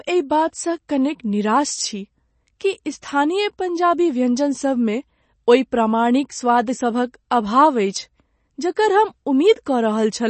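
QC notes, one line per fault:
Throughout, MP3 compression. Nothing is heard above 8.3 kHz, so the speech sounds dull. Weak frequency lines switch on and off between frames, giving a plainly audible watery, swirly texture. S sounds turn metallic. The likely cause is a bit-starved encoder, consistent with 32 kbps.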